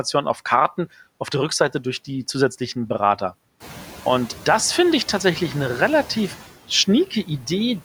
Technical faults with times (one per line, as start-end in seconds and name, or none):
0.00-7.85 noise suppressor artifacts
7.07-7.45 speech cut by the noise suppressor